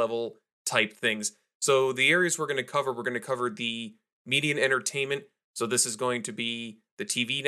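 Nothing here stands out as a fault; the speech runs along with no glitches or interruptions to report at any point.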